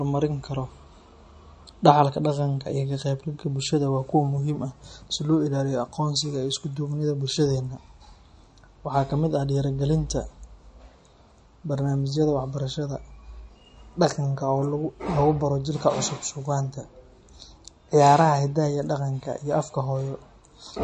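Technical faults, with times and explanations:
Throughout, MP3 compression: the whole recording sounds washy and swirly, and nothing comes through above 10.6 kHz, so the top end feels shaved off. That's likely a low-bitrate MP3 encode, something in the region of 40 kbps. The encoder runs short of bits, chops the treble at a fixed point and drops quieter frequency detail, which flickers in and out between frames and gives that watery, metallic edge to the speech.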